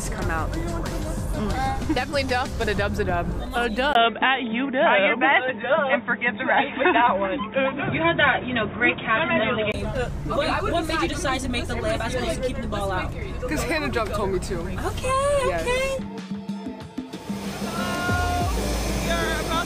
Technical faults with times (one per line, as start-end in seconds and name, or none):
3.93-9.74 input switched to a poorer device